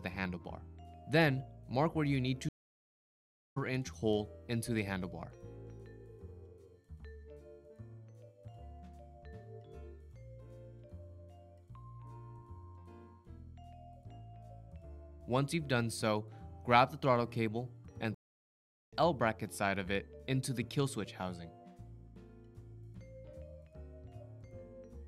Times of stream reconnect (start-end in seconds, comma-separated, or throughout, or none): 2.49-3.58, 18.14-18.93